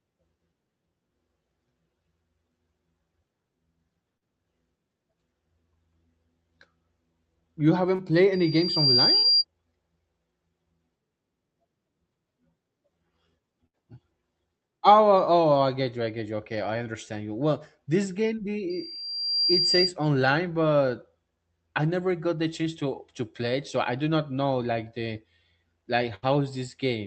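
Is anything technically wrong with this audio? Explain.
Yes, there are three kinds of fault in this speech, all typical of a call path.

Short concealed packet loss shows up at about 4.17–4.23 s, 7.95–8.01 s, 9.19–9.25 s and 18.35–18.39 s. Each time, a few tens of milliseconds of audio didn't reach the decoder in time, so the receiver extended the previous sound, keeping its pitch if voiced or as shaped noise if not, and then crossfaded back. You hear a quick smear or little wobble, and a short consonant can drop out.

Loudspeaker feedback squeal kicks in twice, from 8.33 to 9.45 s and from 18.69 to 19.95 s. The microphone is picking up the speaker it feeds, and around 4.8 kHz the loop gain tops one, so that frequency feeds on itself. It's a thin, high tone that swells over roughly half a second to most of a second until it sits about 5 dB above the speech. The 9.19 s dropout lands inside the first one.

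Burst of packet loss hits at 13.67–13.75 s and 26.15–26.25 s. This time a run of audio of about 60 to 80 ms went missing. The concealment holds the last sound and fades it down as the gap continues, so you get a short buzzy hold or fading hiss. Then the speech picks up further along with that bit missing. The top end stops around 8 kHz, which fits the call codec's bandwidth setting.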